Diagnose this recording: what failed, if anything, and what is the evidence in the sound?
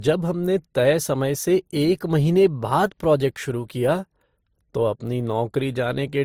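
Codec stage: throughout the speech, two distinct sets of coding artefacts overlap, with content reaching 20.1 kHz. This is likely transcoding between lossy codecs, fitting MP3 then Opus.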